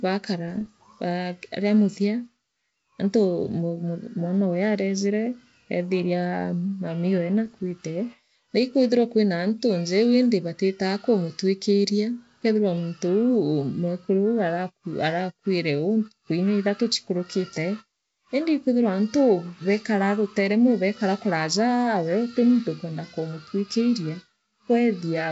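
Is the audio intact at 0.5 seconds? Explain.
No, bit errors on an ADPCM link hit from 0.48 to 0.68 s, just before "ba riamuthia". Each flipped bit throws off the decoder's step size and predictor, producing pops, rough bursts and brief level jumps.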